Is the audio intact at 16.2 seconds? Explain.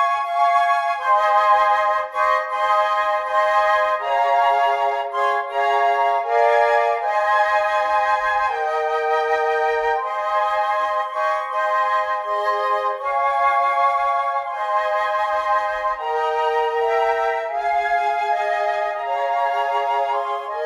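Yes, the audio at 16.2 seconds is intact, with no dropout, click, distortion or other fault at that moment.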